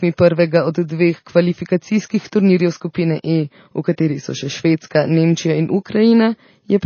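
From start to finish, the speech has most likely been through heavy MP3 compression at a very low bitrate, something in the region of 24 kbps. Starved of bits, the encoder has cut the treble off flat at 6.5 kHz and is dropping weaker frequency lines that come and go from frame to frame. The result is plainly audible throughout: dull, band-limited sound with a watery, swirling texture, metallic chirping on s sounds, and smeared consonant attacks.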